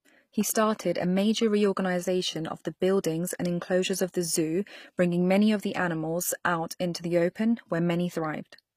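Throughout the speech, the treble sounds synthetic, with gritty, lispy s sounds, likely from HE-AAC compression at a low rate around 24 kbps. Upper bands are replicated from lower ones, so a spectrogram shows blocky, repeated treble texture and nothing above 15.5 kHz.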